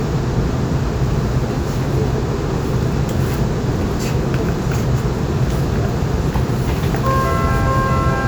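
Nothing to flag: no technical faults are audible anywhere in the recording.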